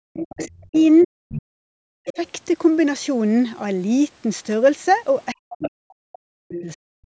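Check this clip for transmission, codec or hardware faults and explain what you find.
Three faults are present: a constant DC offset, leakage of the far-end voice, and suppression of the near-end talker during double talk.

DC offset runs through the whole clip. A constant shift displaces the waveform from the zero line, costing headroom and showing as steady energy at the very bottom of the spectrogram.

The other side's voice leaks through at 0.13 to 0.84 s, 1.01 to 1.07 s, 2.05 to 2.29 s, 5.59 to 5.70 s and 6.52 to 6.61 s. These are fragments about 10 to 25 dB below the main talker, likely loudspeaker echo the canceller missed. On the spectrogram they appear as weak, separate harmonic traces.

Speech is suppressed in double talk at 0.24 to 0.76 s, 1.04 to 2.19 s and 5.52 to 6.90 s. The talker dips sharply, by about 40 dB at worst, likely because the echo canceller attenuated both voices at once. 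This shows as gouged-out gaps in the waveform envelope.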